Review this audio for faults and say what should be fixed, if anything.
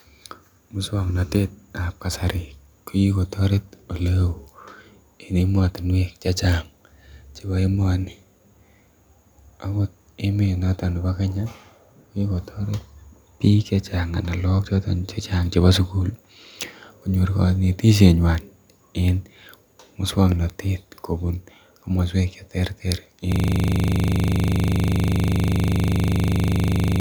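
From 23.32 s to the end, the speech collapses into a steady buzz at 25 Hz: a system hang loop. The host or driver froze while the audio hardware kept replaying one 40 ms ring-buffer segment, repeated roughly 90 times. Fixing it means finding the stall, and a watchdog that mutes output when the buffer stops being refilled would prevent the loop.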